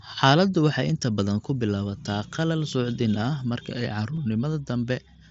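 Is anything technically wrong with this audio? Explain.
Yes, one brief fault. At 4.16 s there is concealed Bluetooth headset packet loss in this speech, audible through the light grain of the mSBC wideband codec. About 15 ms of audio went missing, which points to two lost frames. The receiver filled the hole by repeating the closest-matching slice of recent waveform, so instead of a silent dropout or click there is a momentary buzzy smear at full level, with a faint warble as real audio resumes.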